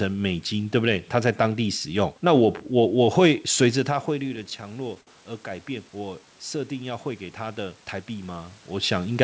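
From 4.08 s to 8.97 s the level climbs slowly as automatic gain rising takes effect. The input had fallen by about 14 dB, and the gain control answered by raising its gain by about 6 dB over several seconds. Room noise swells along with the speech, which separates this from the talker simply moving back toward the microphone: a change in distance alters the speech level but leaves the background untouched.

Inside that span, from 4.23 s to 5.08 s, there are repeated stalls (stutter). Packets kept arriving late, and the jitter buffer ran dry 13 times. Each time the receiver stretched the last sound to cover the wait, with the longest gap at 59 ms, and together these fills make up about 21% of that stretch. No audio is actually lost, so the speech drags and hiccups rather than skipping ahead. Dropouts or clipped packet loss would instead leave holes or jumps in the sound.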